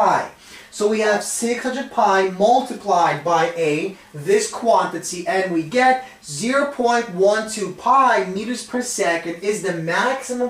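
No technical faults are audible anywhere in the clip.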